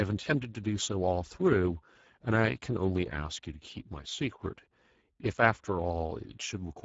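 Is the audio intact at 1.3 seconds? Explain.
No. At 1.3 seconds the speech sounds hoarse and noisy, with nothing above 7.7 kHz, as it does throughout. That is Speex codec damage: at a low setting, fitting roughly 10 kbps, too few bits remain to describe the excitation faithfully.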